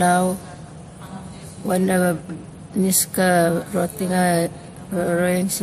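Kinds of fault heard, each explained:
Transcoding between lossy codecs, throughout: the speech carries stacked codec smearing and a hard ceiling at 15.1 kHz, likely from a low-rate MP3 re-encoded to WMA.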